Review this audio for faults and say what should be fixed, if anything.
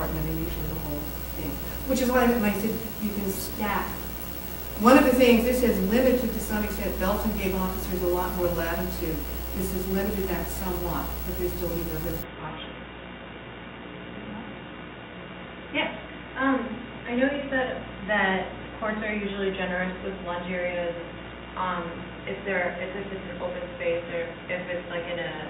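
At 12.23 s the sound turns dull and boxy and stays that way to the end, with nothing above 3.8 kHz, a new background noise about 35 dB under the signal, no gap, and no obvious level jump. This points to an input switched to a poorer device, likely a fallback microphone or a headset call profile. To prevent it, lock the recording to a fixed input device and turn off automatic device switching.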